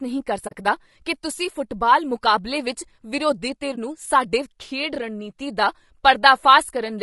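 Speech, heard throughout with a rough, grainy texture. Noise fills the gaps between the harmonics, and the top band sounds thin and synthetic. The likely cause is low-delay AAC compression, as in AAC-ELD. Its short frames resolve pitch poorly, and the damage points to a low bitrate of around 32 kbps. There is also AAC frame loss with muting, heard as a soft-edged hole and a brief dip. The first runs from 0.47 to 0.54 s, about 40 ms, which fits two lost frames. The second runs from 3.75 to 3.78 s, about 20 ms, which fits one. The decoder zeroed the missing spectrum, so the overlapping windows fade the sound out and back in.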